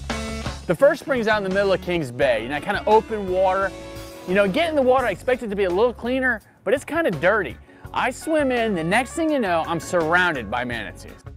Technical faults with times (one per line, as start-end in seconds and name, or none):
0.00-11.36 clock drift between sender and receiver
0.60-11.20 repeated timing corrections